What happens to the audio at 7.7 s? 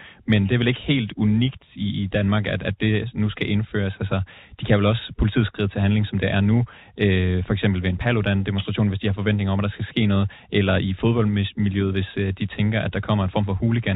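At 7.7 s the speech runs through intact, with nothing breaking, dropping or distorting, only the steady narrow bandwidth of its G.711 telephone coding.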